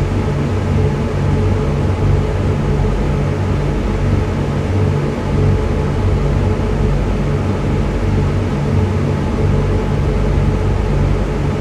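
No technical faults are audible.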